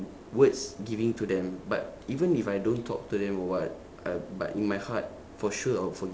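No technical faults can be heard in this speech.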